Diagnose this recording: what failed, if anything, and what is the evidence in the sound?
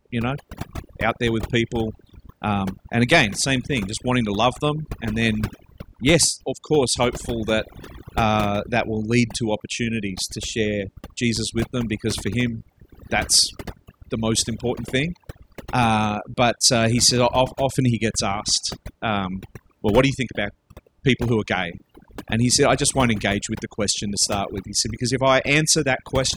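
The failure is overdone noise removal at the processing stage, and it runs through the whole speech clip. Between phrases the background drops to near silence, broken by twinkling specks where isolated bands pop back above the gate. The suppressor was set too aggressively, so it cut individual frequency bands hard whenever they came near its noise estimate, and the quieter parts of the speech spectrum were removed along with the noise.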